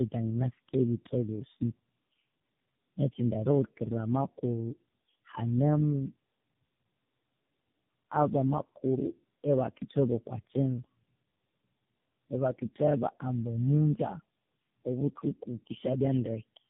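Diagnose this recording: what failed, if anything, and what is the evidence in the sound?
Tandem speech coding at the codec stage: throughout, the speech sounds rough, muffled and warbly with nothing above 3.8 kHz, which points to about three low-rate coders in a row, degraded beyond any single codec.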